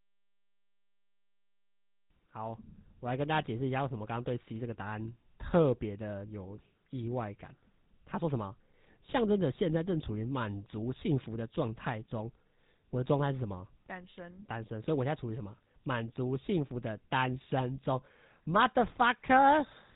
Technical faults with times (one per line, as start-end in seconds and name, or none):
0.00-19.96 GSM full-rate codec